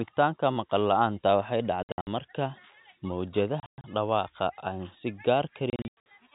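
Speech over a telephone-band G.711 link that cuts off above 4 kHz, broken three times by bursts of abrupt dropouts: 1.83 to 2.07 s, 3.60 to 3.84 s, and 5.70 to 6.06 s. This is packet loss filled with silence. Lost packets were replaced with nothing, so each burst scatters 180 to 240 ms of gaps, the longest run 60, 120 and 90 ms, whose sizes fit 30 ms packets.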